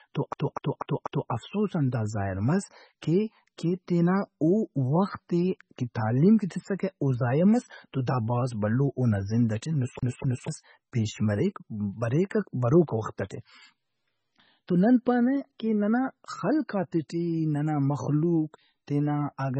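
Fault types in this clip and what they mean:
MP3 compression: Throughout the speech there is heavy codec damage, likely from MP3 encoding at a very low bitrate, around 16 kbps. Starved of bits, the encoder drops weak frequency lines, which flicker in and out between frames and give the speech a watery, swirly quality with smeared onsets. On a spectrogram the content stops sharply at 8.3 kHz, with nothing above it. Below that edge the energy looks patchy and blocky, with holes that appear and vanish frame by frame.
CD stuck on one turn: A skipping-disc stutter, where a damaged spot keeps throwing the laser back one track so the same 245 ms slice replays with a brief mute at each jump. It occurs from 0.33 to 1.31 s, repeating 4 times just before "افسوزان دا ظاہر مس", and from 9.99 to 10.48 s, repeating 2 times just after "بھلو اونا زند ئٹے". The waveform shows identical blocks about a quarter-second long separated by tiny gaps, and the spectrogram shows matching repeated patterns.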